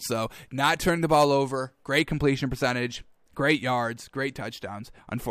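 For the first 2.0 s of this speech clip, pre-emphasis was left on: the treble boost applied before recording was never undone by the matching de-emphasis, and the tilt fits the 50/15 µs CD curve. From 0.0 to 2.0 s the highs stand about 8 dB above the 1 kHz level at 10 kHz, so the sound comes across thin, bright and hissy, with sharpened sibilants, until the balance settles after that point.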